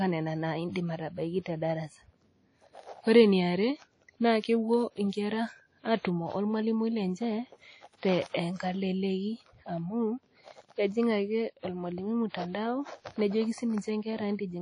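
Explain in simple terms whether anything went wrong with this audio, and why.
The speech sounds washy and ringing from start to finish, with nothing above about 10 kHz, likely from heavy WMA compression.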